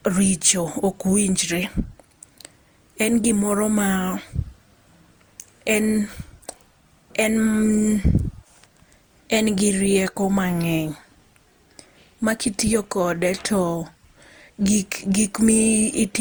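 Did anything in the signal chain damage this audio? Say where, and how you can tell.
Yes, at the codec stage, throughout the speech. It sounds swirly, smeared and hollow, more so than the bandwidth would suggest, since content still reaches 20.2 kHz, which fits Opus at around 64 kbit/s. Consonant attacks are blurred. The likely cause is generation loss from about five encode-decode passes, each quantising on a shifted frame grid so the errors compound. A spectrogram would show flickering holes and smeared onsets. The waveform's transients would look softened.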